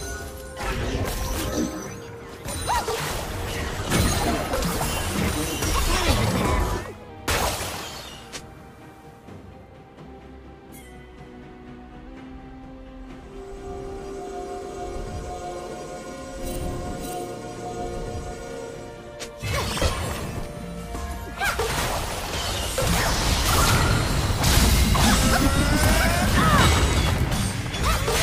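At 5.94 s the audio jumps about a semitone sharp and runs 6% fast until 7.10 s, then snaps back. At 10.82 s it drops about a semitone flat and 6% slow until 12.07 s. Both are a drift correction step, likely from clock-matching software resetting its playback rate in one move to manage its buffer. Pitch and tempo shift together and hold steady, with abrupt edges. That is unlike wow or flutter, which wander continuously.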